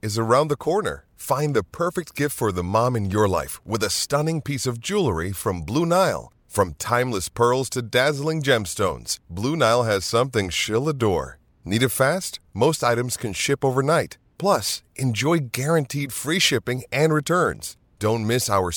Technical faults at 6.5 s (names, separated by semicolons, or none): none